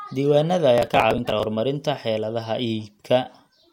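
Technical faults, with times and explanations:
0.78 to 1.44 s, processor overload crackle: for about two-thirds of a second the speech takes on a gritty, tearing crackle, then clears abruptly. The processor is falling behind and missing one audio deadline after another. Each late block is simply skipped, leaving a small hole with hard edges. The spacing of the clicks fits blocks of around 10 ms, with several dozen dropped in quick succession, so the gaps merge into a continuous rasp laid over the voice.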